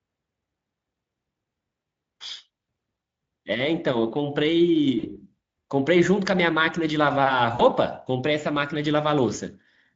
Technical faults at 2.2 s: none

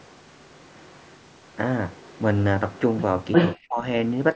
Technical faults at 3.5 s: echo leak; speech suppressed in double talk

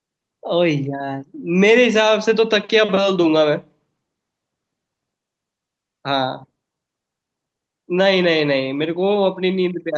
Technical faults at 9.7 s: none

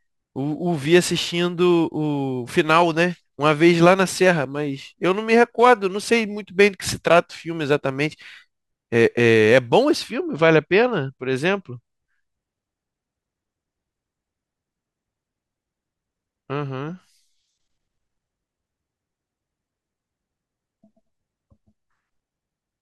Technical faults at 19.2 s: none

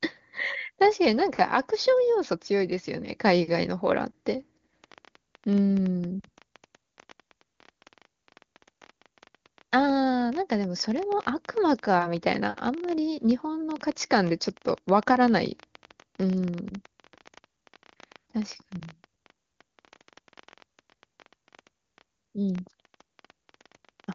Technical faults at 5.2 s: train of clicks

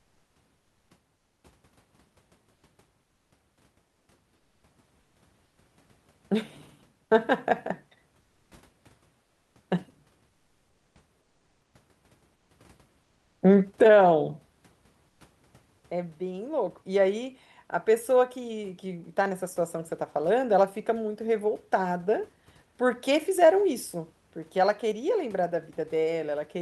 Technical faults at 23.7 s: none

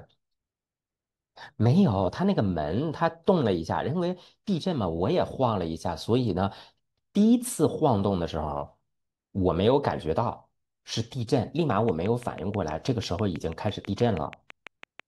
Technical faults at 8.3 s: none

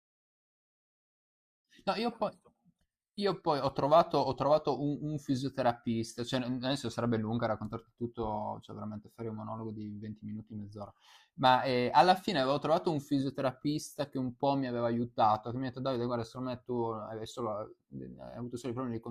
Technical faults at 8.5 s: none

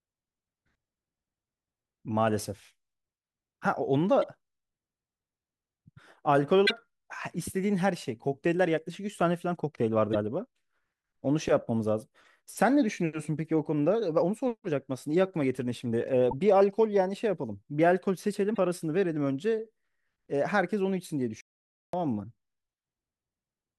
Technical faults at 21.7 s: playback stall

